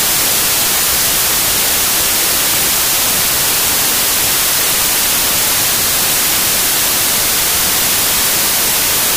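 From the first moment to the end, the whole clip suffers from a wrong sample width. It sounds like audio stored as packed 24-bit integers but read back as 16-bit. Each 3-byte sample gets split across 2-byte words, so most values mix bytes from neighbouring samples, and only some line up with the real top bits. You hear loud hiss with the original buried underneath, playing at about 0.667 times speed, so it's noticeably slower and lower in pitch.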